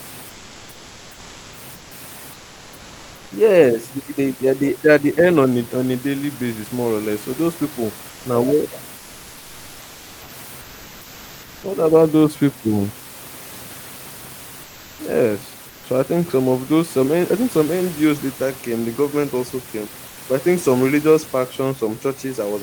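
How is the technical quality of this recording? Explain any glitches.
Comfort noise replaces the real background during pauses in this speech. It happens at 0.29–1.53, 1.75–1.91, 2.33–3.31, 8.09–8.25, 8.97–10.29, 14.63–14.99, 15.69–15.83 and 20.07–20.17 s. The room noise, about 22 dB below the speech, gives way to a flat synthetic hiss about 1 to 4 dB quieter. The likely cause is discontinuous transmission: the sender goes silent between phrases, and the receiver fills the gaps.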